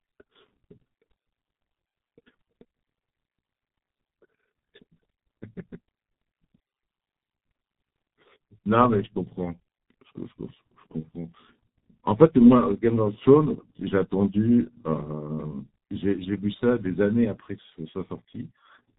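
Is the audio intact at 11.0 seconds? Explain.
No. From 11.00 to 11.06 s there is a VoIP packet loss concealed by the speech codec. About 30 ms of signal, consistent with one lost 30 ms frame, was replaced by the decoder's own extrapolation from its last pitch and filter state, with the gain stepped down as it went. That gap sounds like a brief stretched sound that fades rather than a clean dropout, and the speech stays thin or distorted for a short stretch after 11.06 s while the decoder rebuilds its state.

That moment also carries the G.723.1 codec damage heard across the whole clip. The sound is band-limited to below 4 kHz and heavily degraded, which points to a bitrate near 6.3 kbit/s. Because the codec works in 30 ms frames and updates its model of the voice slowly, the speech comes out muffled and hoarse at 11.0 s, with consonants smeared rather than crisp.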